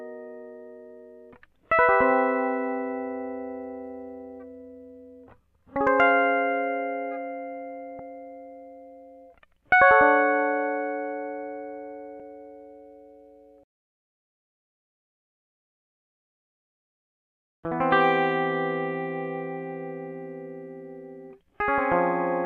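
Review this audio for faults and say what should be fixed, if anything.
The music has two short bursts of damaged data in a compressed stream: one at 7.99 s and a longer one from 12.17 to 12.20 s. At each point the compressed bytes no longer form valid frames, so the decoder misreads or discards them, loses frame sync, and outputs a brief garbled sound while it searches for the next good frame header. Re-fetching or re-encoding the file from an intact source and verifying it with checksums or stream integrity checks after transfer would prevent this.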